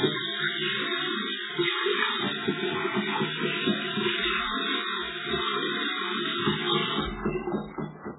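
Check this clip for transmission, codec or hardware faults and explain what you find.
A codec fault runs through the whole clip. Throughout, the sound is watery and swirling, with attacks smeared and nothing above 3.8 kHz. The likely cause is heavy MP3 compression at a bitrate around 8 kbps: starved of bits, the encoder cuts the treble and lets weak frequency lines flicker between frames.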